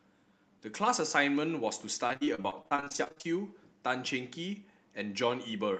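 From 2.07 to 3.26 s the speech breaks up from repeated packet loss (robotic sound). There are twenty dropouts of up to 40 ms each. Each is concealed by extending the previous sound, which gives a choppy texture.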